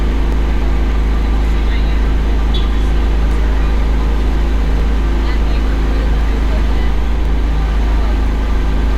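Everyday sounds, interrupted by seven sharp, isolated clicks at 0.32, 1.45, 3.31, 4.80, 6.21, 7.25 and 8.26 s. Each is likely dropped samples. Under a millisecond of audio goes missing, so the waveform jumps abruptly to a later value.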